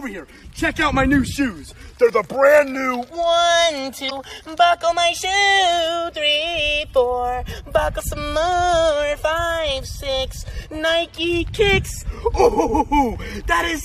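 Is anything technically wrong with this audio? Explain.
Yes. From 4.06 to 4.12 s there is a brief glitch of roughly 55 ms that breaks into the sound. This is damaged data in a compressed stream. A short run of the encoded data was corrupted, so the decoder could not read those frames correctly, lost its place in the stream, and produced garbage until it found the next valid frame header and resumed normal decoding.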